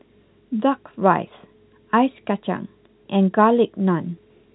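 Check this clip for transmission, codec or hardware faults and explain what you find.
Nothing stood out on listening to this telephone-band speech, which is carried over G.711 A-law coding and has nothing above about 3.9 kHz.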